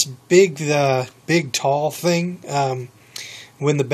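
Nothing in the audio stood out as a technical problem on listening.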